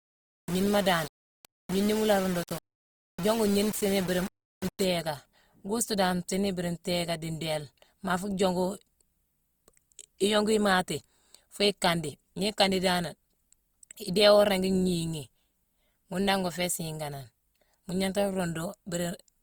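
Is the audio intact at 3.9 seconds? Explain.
No. At 3.9 seconds the sound is coarse and gritty, with a distortion that rises and falls with the signal, sitting roughly 15 dB below it. This gritty stretch runs from the start to 4.84 s. The likely cause is low bit depth without dither, consistent with rounding to about 5 bits. Because there is no dither, the error stays tied to the signal instead of spreading into an even hiss. That tracking is what sets it apart from ordinary background noise.

The clip also carries plainly audible Opus compression throughout, so it is present at 3.9 s too. The texture is noisy and grainy, with a rough quality on tonal parts, and there is content up to about 20.2 kHz. That grain likely comes from the music (CELT) mode at a rate around 24 kbps. Band energies are kept and short bands are filled with folded or noise content. This leaves few spectral holes, which is why the sound turns grainy rather than swirling the way MP3 artefacts do.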